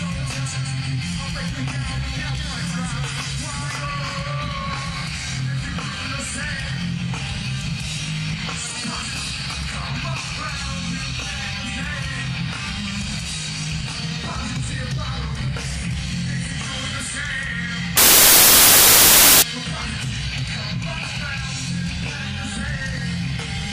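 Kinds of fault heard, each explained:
samples built from the wrong bytes: The reader assembled each sample from its bytes incorrectly, either misaligned by one byte or with the byte order reversed, so the rapidly fluctuating low-order bits ended up forming the most significant part of every value. From 17.97 to 19.42 s, about one and a half seconds, the audio turns into loud, harsh broadband noise. Then the clip returns to normal.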